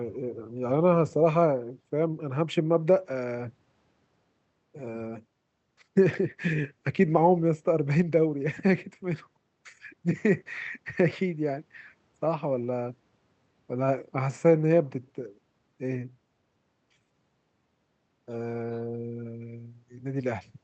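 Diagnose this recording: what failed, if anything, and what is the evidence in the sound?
Nothing failed: the speech carries the ordinary signature of a working call path, band-limited to about 8 kHz and with the light coding texture that fits Opus running at around 64 kbps.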